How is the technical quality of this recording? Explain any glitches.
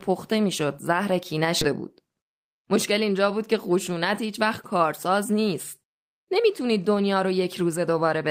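The recording has two closely linked glitches in the speech, both a little after one and a half seconds.

At 1.61 to 1.63 s there is a skip ahead. Roughly 0.7 s of speech was discarded while later audio was already queued, and the two sides are joined with no gap at all. Unlike a dropout, there is no silence or concealment noise, just an abrupt jump forward.

From 1.71 to 2.93 s a jitter buffer speed-up follows. The receiver trimmed short pitch-period slices repeatedly, removing around 50 ms in total, so the speech runs at 104% speed. Pitch stays the same, which separates this from a sped-up recording. The speech is slightly faster rather than higher.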